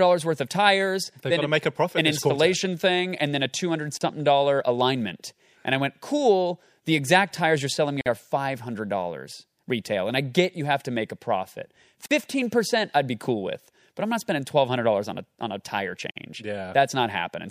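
Pieces encoded separately were joined without trimming, so a gap at a join of encoded pieces cuts the speech every 4 s: silences of 37 to 49 ms at 3.97, 8.01, 12.06 and 16.11 s.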